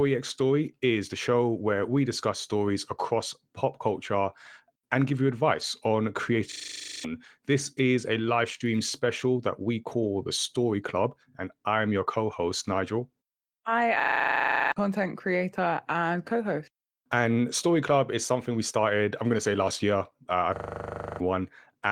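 Right after "and give you", at 5.61 s, there's a brief rough, noisy patch. That's a lost packet rebuilt from error correction: the next packet carried a low-bitrate backup copy, so there's no gap, just about 20 ms of coarser audio, which points to a single lost packet.

Then a system hang loop hits three times: 6.52–7.04 s, 14.0–14.72 s (just before "content creator and co"), and 20.56–21.2 s. Each time the machine froze while the audio hardware kept replaying the same 40 ms of buffer, giving a harsh 25 Hz stutter-buzz that wipes out roughly half a second or more of real audio.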